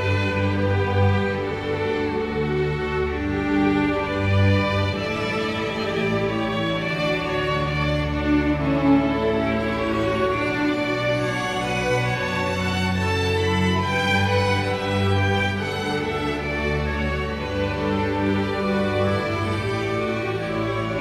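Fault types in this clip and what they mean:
Compressed frames skipped: whole blocks of the encoded stream never reached the output, either because they were missing or because the decoder rejected them as damaged, so playback jumps forward. At 1.50 s a couple of frames vanish, dropping about a twentieth of a second of audio, and at 4.92 s a longer run of around four frames takes out about a tenth of a second.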